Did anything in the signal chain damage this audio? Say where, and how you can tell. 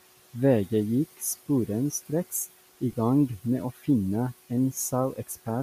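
Yes. Noise suppressor artifacts from the call-processing stage run through the whole clip. The room noise, about 17 dB below the speech, is pulled down by about 15 dB between phrases and swells back under them. Steady recorded room noise would keep a constant level instead.

Lost LE Audio frames, at the codec stage, appear at 2.92 s. A 15 ms dropout, which fits two 7.5 ms LC3 frames, is filled with a brief noisy smear rather than a clean click or gap. That smear is how LC3 concealment sounds, and it is distinct from a buffer underrun.

Speech cut by the noise suppressor, again in call processing, occurs from about 3.74 to 3.87 s. Part of the speech sinks by up to about 14 dB for roughly 150 ms and sounds swallowed. The level dip tracks the suppressor's gating, unlike a codec dropout, which would smear the spectrum.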